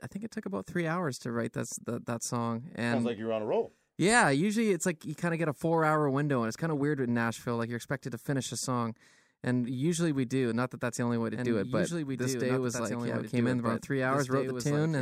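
From 11.35 s, just after "the only way to", a doubled audio track begins and runs to the end: a second, full-band copy of the speech enters abruptly, roughly two seconds behind and a few dB quieter, with no reverb tail or room colour. The likely cause is a slower capture path or an edit holding two out-of-step copies. On a spectrogram the same harmonic patterns repeat about two seconds later, and the waveform thickens with overlapping envelopes.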